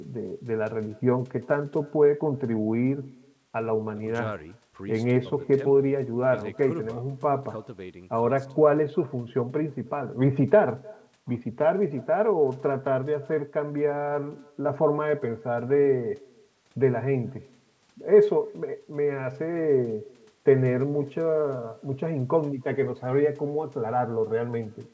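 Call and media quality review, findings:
Echo with no canceller, throughout the clip. Every phrase is followed by a faint, thin copy about a third of a second later, about 27 dB below the talk. Probable component: the far end's acoustic echo canceller, which is missing or bypassed. The far-end loudspeaker feeds its microphone, and the sound returns after the network round trip. The audio band stops at 8 kHz, which fits the G.722 wideband codec.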